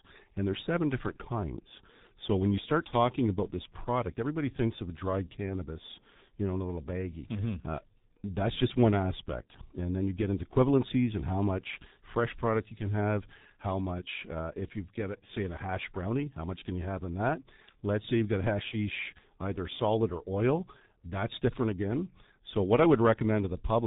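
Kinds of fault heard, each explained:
G.723.1 codec: The speech sounds heavily muffled and hoarse, with smeared consonants and nothing heard above about 3.8 kHz. A low-rate telephony codec, which fits about 6.3 kbit/s, encodes the voice in coarse 30 ms chunks with a slowly updated model, discarding detail and high frequencies throughout.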